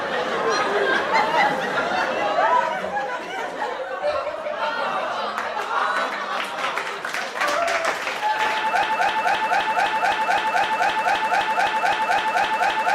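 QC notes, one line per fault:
8.83 s to the end, broken-record loop: a 258 ms fragment of the sound repeats exactly, back to back, about 16 times, with nothing new ever arriving. It sounds like a stuck record skipping in place. The likely cause is that the player, encoder or stream stalled and kept resending the last chunk it held, so the audio that should have played over those final seconds is gone.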